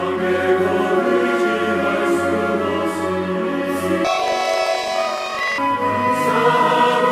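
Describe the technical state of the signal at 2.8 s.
At 2.8 s the signal is intact, with no audible fault at that point.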